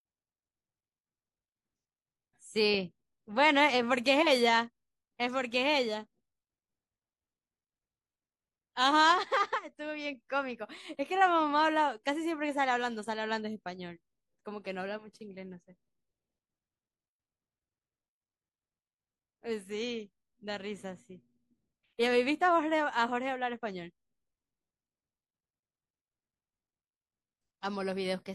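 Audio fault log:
Listening across the speech recording turns up no fault. There is nothing here to log against a time or range.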